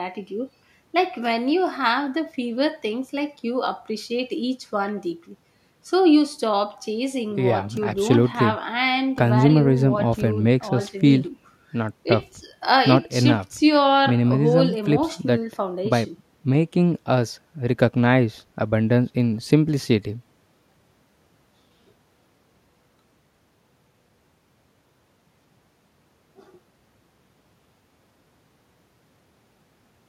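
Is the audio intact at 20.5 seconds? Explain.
Yes, at 20.5 seconds the speech plays through intact, with no dropout, click or other fault at that moment.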